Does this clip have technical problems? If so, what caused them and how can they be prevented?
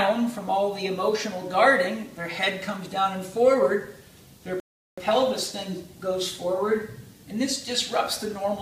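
Yes. A rebuffering stall runs from 4.60 to 4.98 s. The player ran out of downloaded audio, fell silent for 0.38 s, then resumed exactly where it stopped, losing nothing. The waveform shows a flat gap, the spectrogram a blank vertical band. A deeper playback buffer prevents it.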